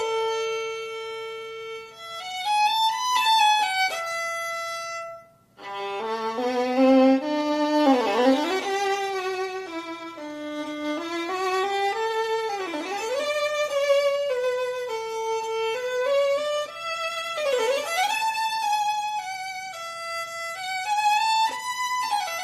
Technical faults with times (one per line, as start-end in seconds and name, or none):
none